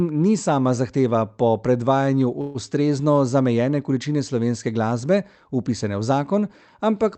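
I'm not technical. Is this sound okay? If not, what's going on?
No. There's a call audio freeze from 2.41 to 2.57 s: the sound briefly turns into a fading buzz or hiss for about 130 ms. Likely some data arrived late, so the player filled in. Nothing was lost; everything afterward is just slightly delayed.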